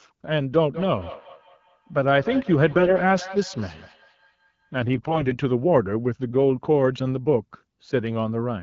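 Speech, carried over AMR-WB (HD Voice) at what sounds like 12.65 kbit/s, with two problems. From 0.74 to 4.8 s there's feedback echo between two devices: a second phone in the room replays what the first handset's mic sent, and that mic picks it up again where its own echo canceller can't touch it. Each bit of speech returns roughly every 200 ms, thinner and ringier, peaking about 14 dB under the direct sound. Then come AMR bit errors at 2.71 to 2.96 s and again at 4.94 to 5.38 s. A weak radio link flipped the less-protected bits, a few percent of them, while the checksum on the core bits still passed, so the pitch and level hold but the sound goes hoarse and gargly.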